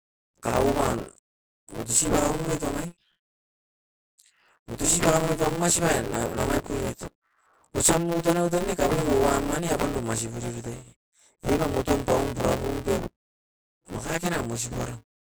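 A steady robotic buzz at about 172 Hz rides on the speech from start to finish, sounding like a rattle that appears with the audio and vanishes in the gaps. This is buffer tearing: the writer and reader of the ring buffer have drifted so they cross mid-period, leaving roughly half of each buffer holding audio from around 20 ms earlier, with hard joins at both edges. The buzz rate fits a 256-sample buffer.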